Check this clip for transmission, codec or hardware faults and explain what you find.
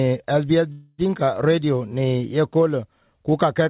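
One transmission fault appears, heard through a phone-band path with nothing above 4 kHz. Call audio freeze, 0.72 to 1.00 s: the last sound smears into a fading buzz for about 262 ms. The audio then resumes intact, likely because delayed packets drained the jitter buffer.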